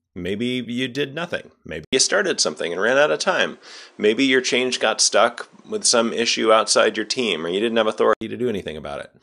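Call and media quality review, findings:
1.85–8.21 s, after "you did nothing": 80 ms gap, nothing above 10.5 kHz, level shift of about 5 dB, added noise floor. Likely input switched to a poorer device.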